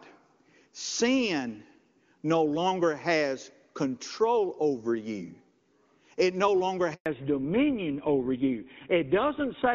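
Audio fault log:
6.94 to 7.06 s, handover gap: right after "no longer" the speech cuts out within a few tens of milliseconds and stays silent for 120 ms before the sound resumes. The call was being moved from one network to another, and during that switch no speech frames reached the receiver. With nothing to decode, the output simply went quiet. Whatever was said in that interval is gone and cannot be recovered.
7.06 to 9.74 s, fallback to narrowband: from the end of the gap onward the speech loses its airy top end and sounds muffled and coarser, with nothing present above 4 kHz. Before the gap, the HD Voice link carries brighter, fuller speech, consistent with AMR-WB running at a high rate. After the handover, the call resumes on a narrowband codec, which fits GSM full rate at about 13 kbit/s, and that codec cannot carry the upper band at all.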